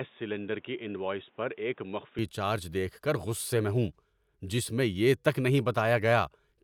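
From 0 to 2.19 s the input likely switched to a poorer device, leaving the speech dull, cut off above 3.8 kHz, slightly quieter and faintly noisy until "چارج دیکھ کر غصے".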